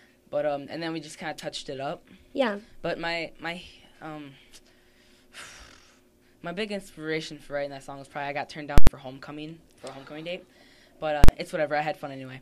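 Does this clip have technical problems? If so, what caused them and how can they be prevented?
Yes. Invalid numbers at full scale occur at 8.78 to 8.87 s and 11.24 to 11.29 s. An invalid or infinite result was forced to the extreme value, so the output sits flat at one extreme value for about 93 ms, which fits a 4096-sample block, then about 46 ms. Each is a loud pop or bang with nothing audible inside it. Clipping, by contrast, keeps the sound's shape under a flattened top. Checking and replacing invalid values before output prevents it.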